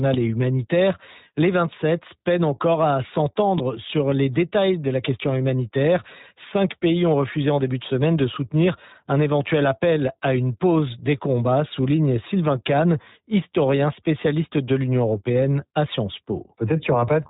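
Speech here, and the whole thing has been through the iLBC codec: nothing above 4 kHz survives, and there's a plainly audible rough, slightly synthetic edge from coding each frame's excitation independently, which fits iLBC's 20 ms, 15.2 kbps mode.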